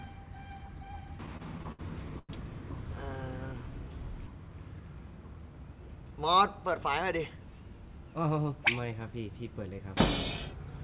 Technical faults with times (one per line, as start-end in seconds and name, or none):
1.26-1.81 repeated stalls (stutter)
2.19-2.31 short stall from a late packet
3.53-3.90 jitter buffer slow-down